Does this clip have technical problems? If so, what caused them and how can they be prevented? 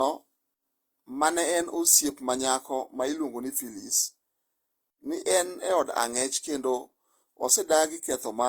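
Yes. Throughout the speech, two sets of coding artefacts are heard together. This is likely transcoding between lossy codecs, consistent with HE-AAC near 40 kbit/s re-encoded as Opus around 32 kbit/s. On a spectrogram, the energy stops at 20 kHz, and the upper bands look patchy and blotchy. Keep a lossless master and encode to the final codec only once.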